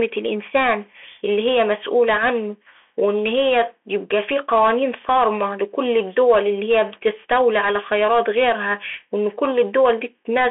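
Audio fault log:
Throughout, Bluetooth CVSD headset codec: the speech is confined to a narrow telephone band, with nothing above 3.8 kHz. The one-bit delta modulator's adaptive step lags on sharp transients, so s sounds come out scratchy and distorted over a granular hiss, which fits a 64 kbps CVSD link.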